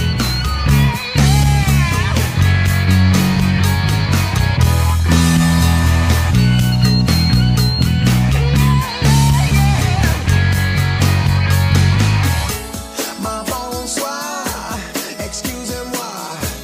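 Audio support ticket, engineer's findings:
Nothing stood out on listening; no findings to report against this clip.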